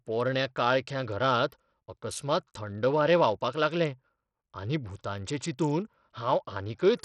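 Throughout, the speech stops at 14.1 kHz, its treble flickering over gritty aliasing rather than MP3-style swirl, likely heavy Bluetooth SBC compression fitting a bitrate near 64 kbps.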